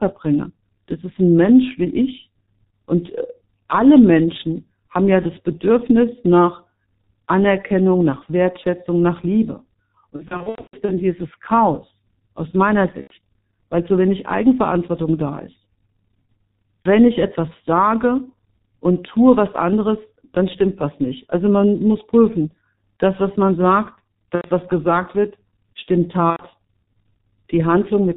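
Throughout, the speech passes through a G.723.1 codec that squeezes it into what sounds like a 6.3 kbit/s stream with heavy damage. Everything above 4 kHz is gone, so the voice is muffled, and the codec's slowly updated vocal model leaves it hoarse, with consonants smeared together.

VoIP packet loss concealed by the speech codec appears at 10.16–10.95 s. Losses totalling 360 ms are scattered over about 720 ms, the longest single gap lasting 120 ms. The decoder fills each gap by repeating its last pitch and filter at falling gain, so the speech breaks into fading buzzy tones and stays weak as normal packets resume. Shorter concealments follow: 90 ms at 13.01–13.14 s, a 30 ms blip at 16.83–16.89 s just before "ich etwas", 90 ms at 24.35–24.49 s between "das was man sagt" and "was gesagt wird stimmt", and 90 ms at 26.30–26.45 s just after "was gesagt wird stimmt". Each sounds like a brief buzzy smear.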